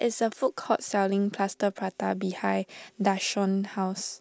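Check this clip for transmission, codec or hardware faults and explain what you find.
Nothing stood out on listening to this speech recording.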